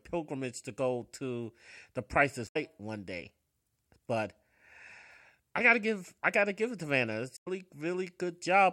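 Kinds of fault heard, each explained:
Damaged data in a compressed stream: corrupt bytes make the decoder misread frames and search for the next header, producing garbled disruptions of 0.12 s at 2.44 s, just before "one day", and at 7.36 s.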